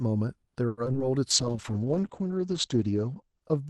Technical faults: repeated packet loss (robotic sound); call bitrate drop; jitter buffer slow-down

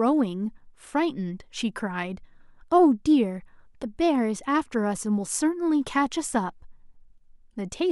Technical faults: none

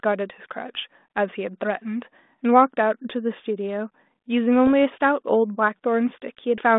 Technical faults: bit errors on an ADPCM link

